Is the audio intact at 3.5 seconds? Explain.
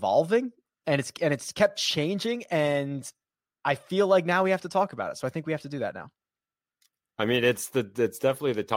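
Yes, at 3.5 s the speech plays through cleanly, with no dropout, click, glitch or other fault to be heard at that moment.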